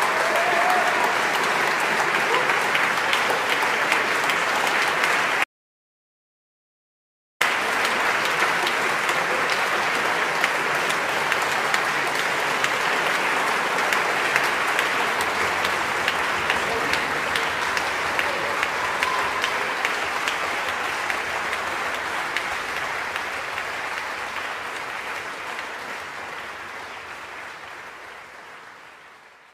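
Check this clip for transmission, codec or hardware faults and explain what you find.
There is one fault, an audio dropout to silence, from 5.44 s to 7.41 s. The sound cuts off abruptly and returns just as abruptly. In between, nearly 2 s is lost. The gap is silent, with no room tone or background hiss. That points to the input vanishing while the recorder kept writing silence. The likely cause is a disconnected device, a failed link or a brief mute. Whatever sounded during the gap is gone.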